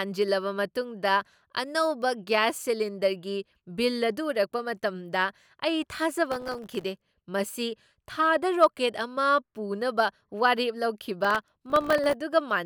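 A gritty burst of crackle tears through the speech from 6.32 to 6.83 s and again from 11.25 to 12.14 s. This is processor overload crackle: dozens of very short buffers, around a millisecond and a half each, missed their deadlines and dropped out as hard-edged gaps of silence.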